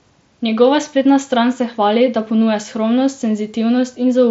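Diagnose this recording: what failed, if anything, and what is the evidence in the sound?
Nothing in this speech recording points to a failure at any stage of the chain. It has the sound of a Bluetooth mSBC headset codec link, with the band stopping near 7.7 kHz and a light graininess from the codec.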